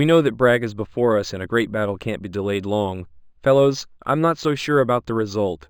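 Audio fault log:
Throughout, imaging from linear upsampling. Straight-line interpolation, consistent with an 11 kHz to 48 kHz rise, dulls the top. Faint mirror images at 5.5 to 11 kHz, about 30 dB down, add metallic shimmer.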